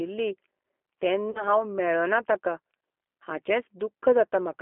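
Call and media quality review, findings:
G.729 codec, throughout the speech: band held to roughly 250 Hz to 3.4 kHz, nothing above. Plainly audible rough, slightly synthetic texture from the encoder rebuilding each 10 ms frame from a vocal tract filter, pitch predictor and a handful of pulses. Probable component: the narrowband speech codec on the call leg; the sound fits G.729A at 8 kbit/s.

VoIP packet loss concealed by the speech codec, 1.31 to 1.45 s, just before "हांव मेळ्ळों ना ताका": about 40 ms of audio missing, which points to two dropped 20 ms packets. The decoder stretches its last pitch and filter into a fading buzzy tone or coloured noise. Because each frame builds on the last, the voice stays weak or distorted for tens of milliseconds or more after packets return at about 1.45 s. Probable component: the network path and jitter buffer.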